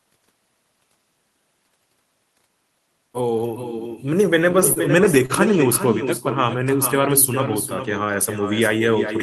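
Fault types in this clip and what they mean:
Echo with no canceller: The far end's loudspeaker feeds its microphone, so the speech returns about 8 dB quieter, roughly 400 ms later, throughout.
Repeated stalls (stutter): Late packets emptied the jitter buffer six times between 4.53 and 5.31 s. Short waits were stretched, so the speech drags and stutters.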